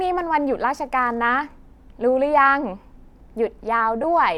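A speech recording with a single instance of lost LE Audio frames at about 4.03 s, where roughly 10 ms of sound, which fits one LC3 frame, went missing over the Bluetooth LE Audio link. The decoder filled the gap by reusing the previous spectrum with randomised signs, so the sound there blurs into a brief noisy smear rather than dropping out. On a spectrogram this shows as a narrow vertical strip of diffuse energy; the waveform shows a short patch of irregular, noise-like cycles.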